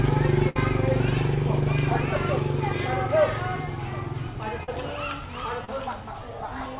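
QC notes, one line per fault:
0.49–0.56 s, burst of packet loss: the sound freezes into a held, fading continuation of itself for about 60 ms, then jumps ahead with that stretch gone. Several consecutive packets never arrived, so the receiver extended and faded the last audio until real data resumed.
4.63–4.69 s and 5.65–5.69 s, short concealed packet loss: each spot is a brief smear or wobble, lasting about 40 ms and 30 ms respectively. Those packets missed the decoder, which synthesised a stand-in from the preceding audio and cross-faded back, so brief details can blur or drop out.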